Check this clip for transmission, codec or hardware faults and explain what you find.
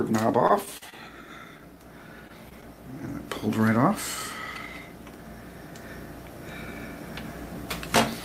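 Transmission faults are present, all of them packet loss patched by the receiver.

Repeated packet loss (robotic sound) runs from 0.47 to 0.94 s. Four gaps, the longest 41 ms, leave about a fifth of this span synthesised, so the audio turns choppy and robotic. Unlike a single dropout, the holes follow one another closely.

Short concealed packet loss occurs at 2.27 to 2.31 s and 2.49 to 2.53 s. Each time about 20 ms went missing and was bridged by extending the preceding sound, giving a brief smear rather than sustained choppiness.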